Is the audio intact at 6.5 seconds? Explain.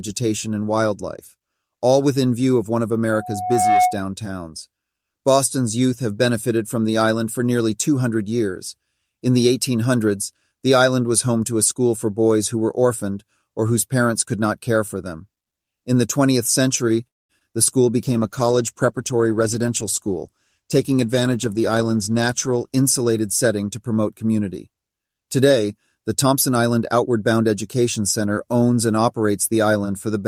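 Yes, at 6.5 seconds the speech plays through intact, with no dropout, click, distortion or other audible fault at that moment.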